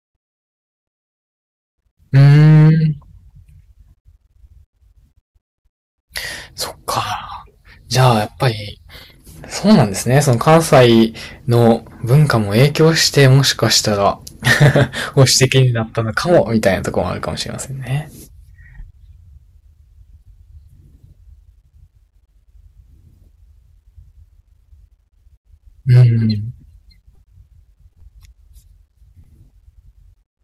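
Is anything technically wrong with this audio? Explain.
Yes, there's hard clipping running through the whole speech clip. The signal was driven roughly 10 dB past what the stage could pass, so peaks get sliced flat, a small fraction of samples, around one or two percent. Those flat tops spray high harmonics, giving a gritty crackle on louder syllables.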